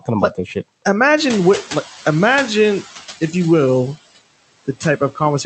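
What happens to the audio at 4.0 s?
At 4.0 s the noise suppressor artifacts are present, as they are through the whole clip. The suppressor lowers, frame by frame, each frequency band it judges to be steady noise, by about 15 dB, so the room noise, which grew louder around 1 s, sinks in the gaps and comes back up under the speech. Unlike a noise gate, which mutes everything at once, this works band by band, so the residue changes in tone rather than simply switching off.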